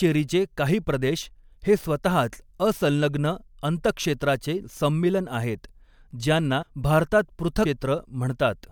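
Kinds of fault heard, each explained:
Compressed frames skipped: The speech lurches forward twice, at 6.61 s and again at 7.65 s just after "ज्यांना भारतात". Each time roughly a fifth of a second goes missing. Whole blocks of the coded stream were never played, either because they were absent or because the decoder rejected them as corrupt. With 24 ms frames, each gap fits somewhere around seven to ten frames dropped.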